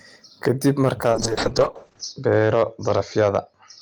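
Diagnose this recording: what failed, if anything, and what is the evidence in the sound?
Loud syllables carry a brittle crackle across the whole recording, with the peaks sounding squared off rather than rounded. This is hard clipping at a gain or converter stage: the speech was driven roughly 5 dB beyond what that stage could pass, so the tops of the waveform were sliced flat. Only a small share of samples, around one percent, actually hit the ceiling, which is why the damage shows up as crackle on peaks rather than constant fuzz.

From 1.12 s to the end the speech turns dull and rough, losing its airy top end and taking on a coarse, watery texture. This is a call bitrate drop in the call processing and codec path: the encoder fell from 32 kbps to 6 kbps and held the lowest rate for about 1.0 s. At that budget Opus narrowed the audio bandwidth from 20 kHz to 8 kHz and quantised what remained much more crudely.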